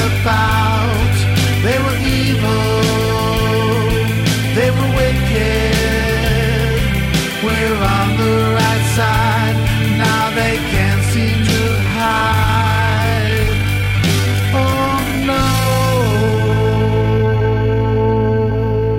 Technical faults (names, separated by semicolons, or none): time-stretched section